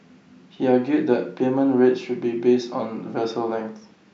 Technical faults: none

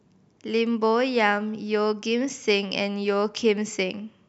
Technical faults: none

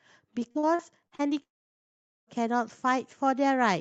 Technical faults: repeated packet loss (robotic sound); long network dropout

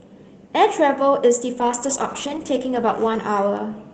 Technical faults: call bitrate drop

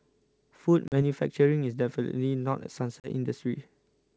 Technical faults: packet loss on an ADPCM call

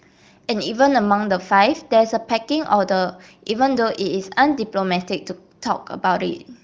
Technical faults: none

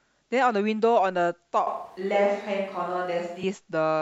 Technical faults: switch to a distant microphone

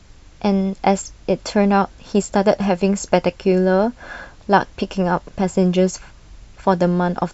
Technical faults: none

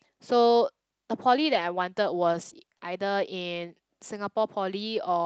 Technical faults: lost packet rebuilt from error correction; repeated packet loss (robotic sound)

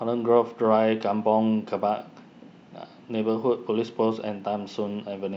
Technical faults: resampler restarted on every block

